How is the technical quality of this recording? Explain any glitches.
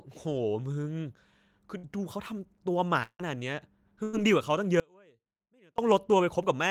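The recording has four network and signal-path glitches, spread through the speech.

Two are bursts of packet loss, at 1.77 to 1.85 s and 4.03 to 4.15 s. A run of packets failed to arrive in time, so the receiver stretched the last received sound to cover the hole, about 56 ms in the first case and 98 ms in the second, fading it as it went. You hear a brief held buzz or hiss, and then the speech jumps ahead, skipping roughly 60 ms and 100 ms. Unlike the longer dropout, the concealment never runs out into silence.

At 3.03 to 3.21 s there is what sounds like a long network dropout. The likely cause is a longer stall in arriving audio. The receiver's concealment fills about 162 ms, the last sound decaying until it gives way to roughly 60 ms of silence, and speech returns with about 160 ms missing. That silent tail after the fade separates it from the shorter bursts, where the concealed sound reaches the resumed speech before dying away.

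From 4.80 to 5.78 s the speech is lost for nearly a second in an audio dropout to a faint residue. The likely cause is a break in the signal feed while the downstream path stayed live. The cut and the return are both abrupt, and the gap holds only a faint sound about 30 dB below the speech. Nothing is synthesised to fill it, so there is no fading buzz as in the network losses, just a sudden drop to a faint residue.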